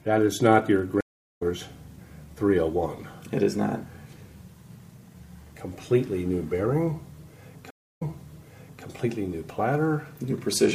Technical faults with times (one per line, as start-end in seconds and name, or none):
1.01-1.42 stream reconnect
7.70-8.84 stream reconnect